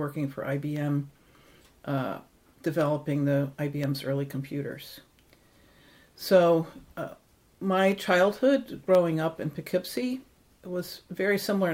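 Regular ticks recur every 1.024 s from 0.76 s to about 11.0 s: periodic USB or driver dropouts, each briefly replacing a tiny fraction of a millisecond of sound with silence.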